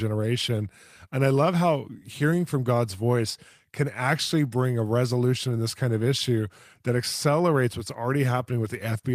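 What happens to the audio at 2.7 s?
Nothing goes wrong at 2.7 s; the speech carries on cleanly through that moment, with no dropout, click or distortion.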